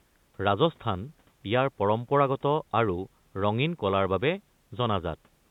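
Nothing goes wrong here; the speech simply has the narrow, phone-like sound of a call path with nothing above 4 kHz, which fits a G.711 mu-law link at 64 kbps.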